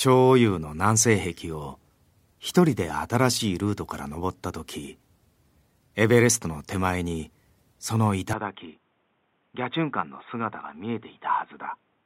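At 8.33 s the speech turns dull and boxy with no gap: everything above 3.8 kHz disappears, the level falls about 5 dB, and a faint new noise floor appears, persisting to the end. The input was likely switched to a poorer, narrower-band device.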